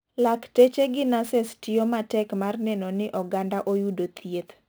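Sample clock jitter runs through the whole speech clip. The converter's clock wobbles by roughly 10 microseconds, so samples land slightly off time, and the error rides about 25 dB below the signal as a gritty hiss that swells on loud, bright sounds and drops away in pauses.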